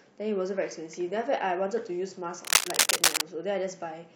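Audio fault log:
2.45–3.21 s, cable scratch noise: a dense, uneven burst of scratching and rustling lies over the speech for about 0.8 s, somewhat louder than the speech itself, likely from a worn cable or connector being moved so its contact resistance fluctuates rapidly.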